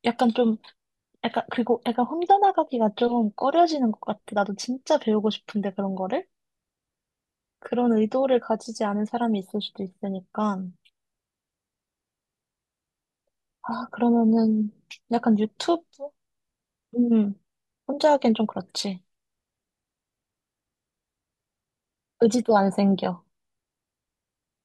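Speech recording, no technical faults detected anywhere in the clip.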